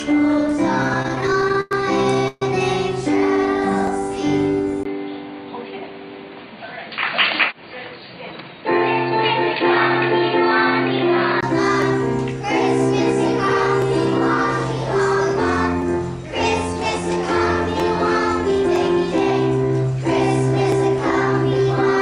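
From 0.83 to 2.42 s, repeated stalls (stutter) stretch the sound: 14 brief holds, the longest 135 ms, continue it while late packets arrive, so it drags without losing anything.

From 4.83 to 11.43 s the band narrows after a 20 ms silence, with new noise about 30 dB down at unchanged level, likely an input switched to a poorer device.

From 16.72 to 20.00 s a jitter buffer speed-up trims about a tenth of a second, running 3% faster at unchanged pitch, unlike resampling, which would shift pitch too.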